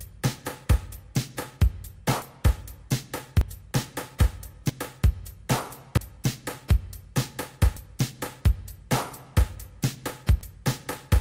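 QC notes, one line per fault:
2.22 to 10.41 s, dropped buffer (overrun): six abrupt skips, at 2.22, 3.41, 4.69, 5.97, 7.77 and 10.41 s. Each is a sudden jump forward in the sound. No gap of silence is heard. Roughly a tenth of a second goes missing each time, a little more at 5.97 s. The likely cause is samples not read before the hardware overwrote them. The two sides then butt straight together.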